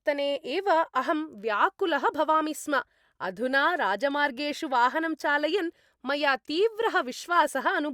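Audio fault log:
No faults are audible anywhere in the speech signal.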